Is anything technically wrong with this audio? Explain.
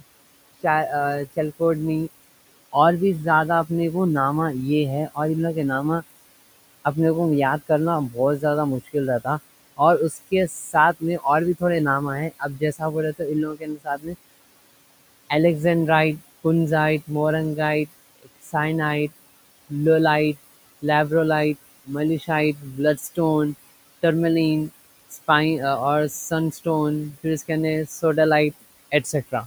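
Yes, there are two related problems, both coming from the noise suppressor working on the room noise, which sits about 18 dB under the speech.

Noise suppressor artifacts run through the whole clip. The suppressor pulls down the bands it judges to be steady noise by about 19 dB, frame by frame, so the background dips between words and comes back under them.

Speech cut by the noise suppressor shows up in five stretches: 7.69 to 11.62 s (after "اپنے کو یاد", before "تھوڑے نامہ"), 12.3 to 14.16 s, 17.86 to 18.54 s, 21.85 to 23.18 s (after "لولائٹ لیبرولائٹ"), and 26.1 to 28.03 s. The suppressor mistakes soft parts of the speech for noise and turns them down by about 14 to 21 dB. Only short bits within each stretch are affected, but they sound swallowed or faint.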